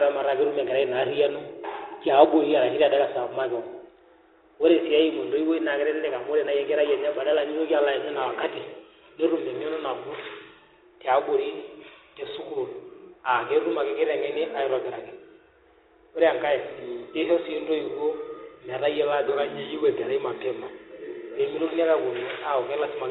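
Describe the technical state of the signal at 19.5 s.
At 19.5 s the speech carries the Bluetooth CVSD headset codec damage present across the whole clip: a one-bit up/down delta stream, consistent with 64 kbps, whose adaptive step lags loud high sounds, leaving scratchy s sounds and granular hiss. A spectrogram shows a hard ceiling near 4 kHz.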